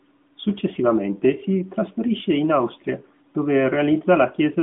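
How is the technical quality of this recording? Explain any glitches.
Nothing here sounds like a glitch, so there's nothing to pick apart in this speech recording.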